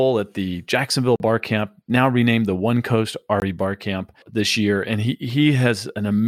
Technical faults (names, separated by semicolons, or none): block of digital silence